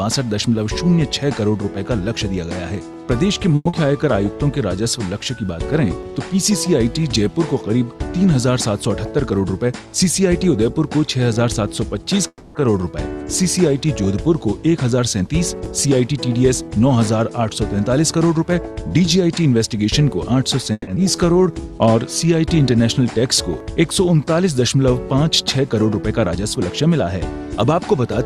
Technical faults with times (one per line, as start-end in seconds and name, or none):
3.55-3.68 call audio freeze
3.69-3.76 short concealed packet loss
9.09-9.94 jitter buffer speed-up
12.28-12.58 call audio freeze
14.83-19.46 jitter buffer speed-up
20.72-20.90 call audio freeze
20.95-20.99 skip ahead
21.03-21.62 jitter buffer slow-down
25.82-26.62 jitter buffer speed-up